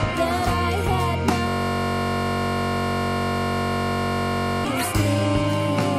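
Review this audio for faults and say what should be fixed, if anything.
System hang loop from 1.48 to 4.65 s: a 21.33 ms slice (fits a 1024-sample buffer) repeats exactly, making a steady 46.9 Hz buzz rather than mains hum or random dropouts. Prevent it by running audio on a real-time thread with a watchdog that mutes output when the driver stalls.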